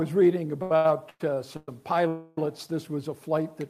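Between 0.62 and 1.69 s the audio drags and stutters through five brief hangs, the longest about 111 ms, with roughly 394 ms of held-over sound filling 37 % of that stretch. These are repeated stalls (stutter): packets kept arriving late, the jitter buffer kept running dry, and the receiver extended the last sound each time rather than dropping anything. From 2.08 to 2.38 s the sound hangs again as a continued buzz that fades but never reaches silence, adding about 295 ms before the audio resumes where it left off. This call audio freeze was likely caused by packets held up in transit, leaving the jitter buffer empty until they arrived and shifting the delay by that same 295 ms. From 3.20 s to the end at 3.69 s the audio plays at about 91 % speed with unchanged pitch, sounding drawn out. This is a jitter buffer slow-down: the receiver repeated single pitch periods to add about 53 ms and rebuild its reserve.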